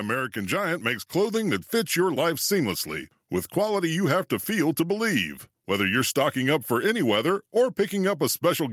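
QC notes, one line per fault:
0.33–1.45 s, automatic gain rising: the gain control judged the input too quiet and lifted it by about 4 dB over roughly a second, so speech and background noise swell together. On the waveform the envelope ramps upward smoothly; the spectrogram brightens evenly across all frequencies.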